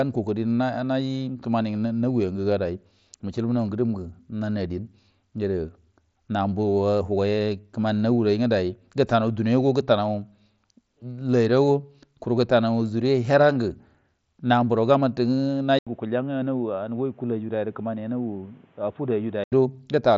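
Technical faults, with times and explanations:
15.79–19.52 s, input switched to a poorer device: after an 80 ms silence the speech turns dull and boxy, cut off at 3.8 kHz instead of the mSBC path's 7.6 kHz, about 5 dB quieter, with faint new background noise; likely a narrower-band microphone took over.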